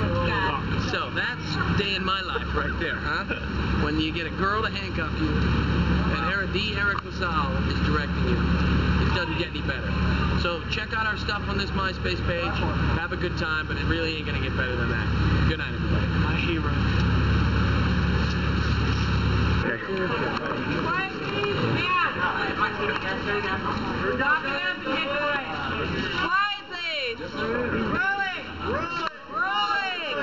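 Throughout, the sound is hollow and phasey, with a dull, filtered colour that stays fixed rather than sweeping. The cause is channel delay (comb filtering): one channel arrives late by less than a millisecond, and when the two are summed to mono, the content common to both cancels at regularly spaced frequencies. The first notch falls around 700 Hz, with further notches repeating at roughly 1.4 kHz intervals above it.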